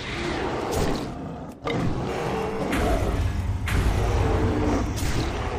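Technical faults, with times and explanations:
0.85 s: dropped buffer (overrun). A small forward jump in the sound is heard at this point, with no gap of silence. The likely cause is that the capture software fell behind and the hardware wrote over a block of samples before they were read. Only a sliver of audio, under two milliseconds, goes missing. The two sides are butted together.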